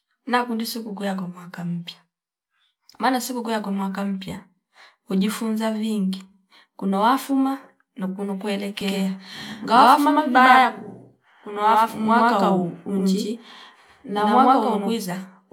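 From 8.81 to 14.95 s, after "kuna wafuma na kuno", a doubled audio track appears: an equally loud copy trails about a tenth of a second behind, likely from a second capture path. Unlike echo, it never decays and switches on abruptly.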